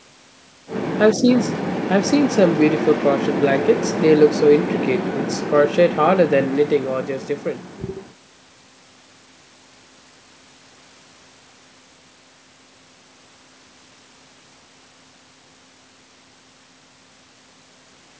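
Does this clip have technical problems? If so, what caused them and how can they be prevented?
No, this clip has no technical problems.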